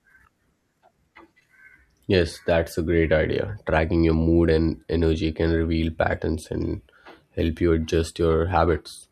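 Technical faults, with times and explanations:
No technical faults found in the speech recording; nothing to log.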